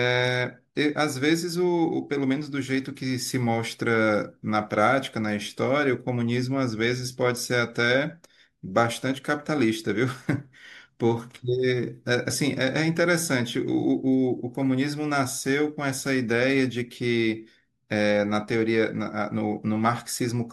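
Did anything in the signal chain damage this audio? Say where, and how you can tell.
No, nothing in the chain damaged this.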